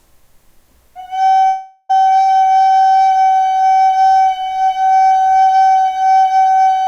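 From 1.47 to 1.91 s the last sound smears on as a fading buzz or hiss, then resumes with about 0.42 s missing, likely a long network dropout.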